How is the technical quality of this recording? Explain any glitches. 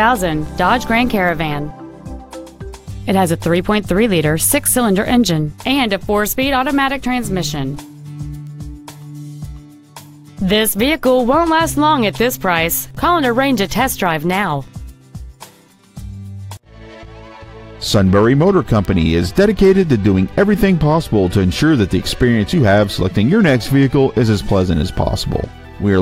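The technical quality is compromised by word clock ticks running from 0.48 s to 25.24 s. About every 0.7 s, roughly thirty in all, a receiver clock drifting around 30 ppm from the sender's slips one sample, leaving a sharp click of uneven strength at a steady rhythm.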